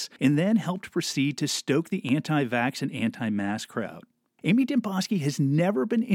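A loud pop at 2.09 to 2.11 s, after "proceed to stoke the", is likely a voltage pulse added to the signal, a sharp thump several decibels above the speech continuing underneath.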